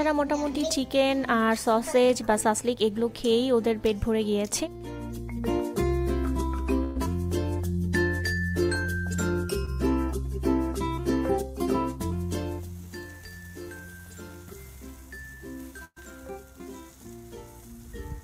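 From 6.83 to 6.97 s, a burst of packet loss drops about 120 ms; the receiver stretches the last sound into a fading fill, and the audio resumes further on. At 9.65 to 9.69 s, a short concealed packet loss loses about 20 ms, patched from the preceding sound as a brief smear. From 15.85 to 15.98 s, another burst removes about 120 ms, heard as a fading continuation with about 50 ms of silence before the audio returns.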